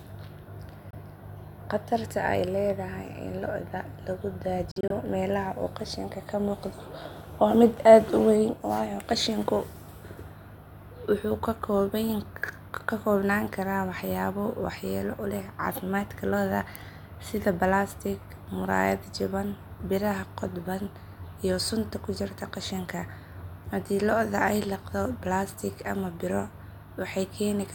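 Bluetooth dropouts at 0.91 to 0.95 s and 4.71 to 4.92 s: the speech cuts to silence for 23 ms, then in several gaps totalling 93 ms (longest 46 ms), each resuming further on, as if it played through. Late wireless packets were likely dropped.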